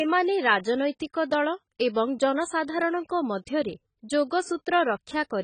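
Speech throughout carries heavy AAC compression damage, likely from AAC-LC at a low bitrate near 18 kbps: dull, smeared sibilants and a spectrogram wall at 9.2 kHz.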